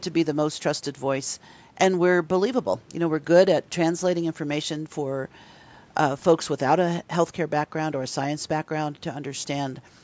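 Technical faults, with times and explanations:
Nothing wrong turns up in this bit of speech; it has simply gone through a call's microphone processing, which trims the lowest bass and leaves nothing above 8 kHz, and that's just how such a path normally sounds.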